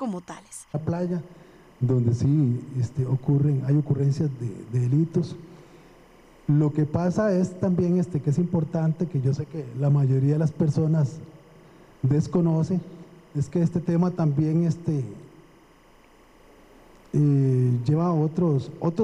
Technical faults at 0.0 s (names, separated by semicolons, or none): timecode bleed